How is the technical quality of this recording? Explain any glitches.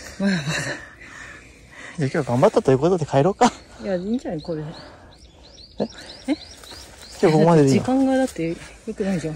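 Three short bursts of hard clipping mar the recording, at 2.43 to 2.75 s, 3.17 to 3.46 s and 7.24 to 7.63 s. Peaks overdriven by about 5, 7 and 4 dB are sliced flat, giving a harsh crackling fuzz. Unlike gentle saturation, the distortion is abrupt and bright, and confined to these loud moments.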